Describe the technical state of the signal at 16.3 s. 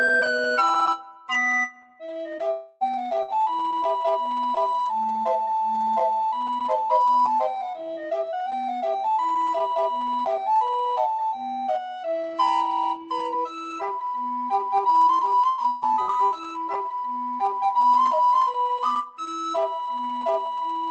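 At 16.3 s you're inside a burst of repeated packet loss (robotic sound), running from about 15.49 to 16.73 s. Packets drop out four times in that stretch, the longest hole 118 ms, and each one gets papered over by stretching the last bit of audio, so roughly a quarter of the span, around 300 ms, is rebuilt. That's what gives it the choppy, robotic quality with pieces missing, on top of the call path's band limit near 8 kHz.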